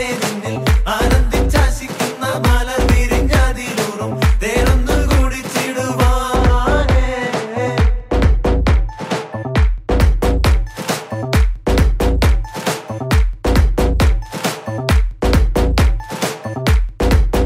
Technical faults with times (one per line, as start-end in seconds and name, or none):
6.36-10.00 de-emphasis applied wrongly